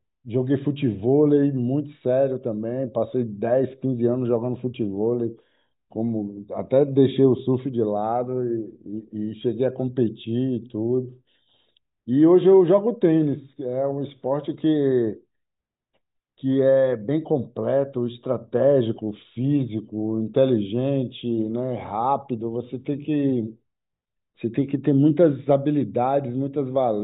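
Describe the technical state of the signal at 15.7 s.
At 15.7 s the speech signal is intact, with no audible fault.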